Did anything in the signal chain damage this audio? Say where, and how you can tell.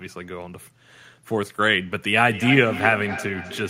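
Yes. From 2.23 s to the end there's feedback echo between two devices at the call-processing stage: the sound comes back around every 300 ms, peaking at about 11 dB under the speech. A second device's speaker is feeding a microphone whose echo canceller doesn't know about it.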